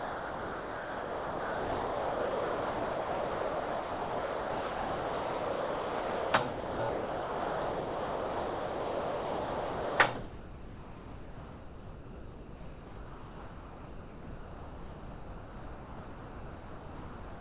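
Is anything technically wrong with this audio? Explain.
Yes. The sound repeatedly gives way to steady comfort noise, from 0 to 6.33 s, 6.49 to 6.79 s, 6.89 to 9.99 s, and 10.15 s to the end, with only brief stretches of the real sound between them. This is likely sound dropped by the voice detector: the sender treated the sound as background, stopped transmitting, and the receiver filled each gap with generated noise. The audio, carried over a call path, has nothing above 4 kHz, which fits G.711 mu-law coding.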